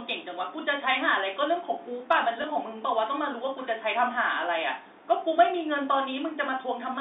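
A speech recording carried over a narrow telephone band, roughly 300 Hz to 3.7 kHz, breaks at 2.42 s with a small blip. That is packet loss with the last packet repeated: one 20 ms stretch of audio failed to arrive, and the receiver filled the gap by replaying the previous packet.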